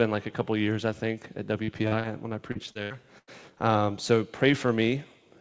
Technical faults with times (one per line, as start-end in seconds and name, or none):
1.64-2.07 short concealed packet loss
2.52-3.30 repeated packet loss (robotic sound)